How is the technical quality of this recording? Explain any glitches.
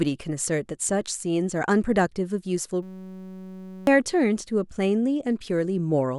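The recording has one serious glitch. From 2.83 to 3.87 s, a system hang loop: the driver froze while the hardware replayed one 5.33 ms chunk, which fits a 256-sample buffer. The result is a steady 188 Hz buzz, not silence or a choppy stutter, and about a second of speech is lost.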